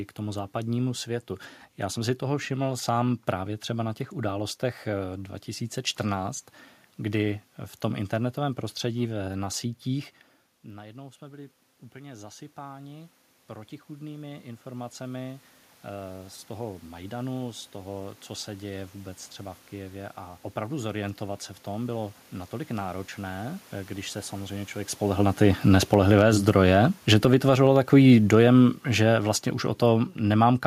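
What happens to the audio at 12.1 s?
Automatic gain rising: after the talker moved away and the input dropped by about 19 dB, the gain control slowly added about 13 dB between 10.62 and 18.21 s. Voice and room noise swell together from after "internetovém prostředí na sítích" until "co se děje vůbec".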